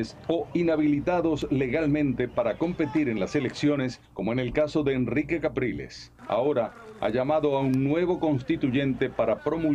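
At 1.42 s and again at 7.74 s, a sharp snap sits on top of the sound, each peaking around -25 dBFS. This electrical switching spike was likely picked up from a nearby switch or motor arcing. Unlike a dropout or glitch, the underlying sound continues uninterrupted beneath it.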